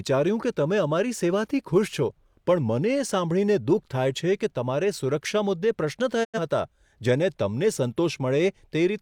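A digital broadcast dropout hits this speech recording from 6.23 to 6.39 s. The level falls away over roughly 20 ms into silence rather than stopping dead, and the sound picks up again later in the programme instead of where it left off. This is the receiver muting after losing the signal or rejecting frames that failed their checksum. The gap of about 85 ms of missing audio points to a couple of lost frames, and that material is gone for good.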